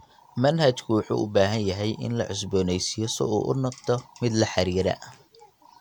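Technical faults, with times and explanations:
No technical faults detected.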